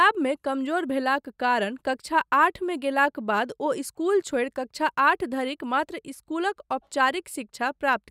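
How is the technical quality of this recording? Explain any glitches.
No glitches or technical problems can be heard anywhere.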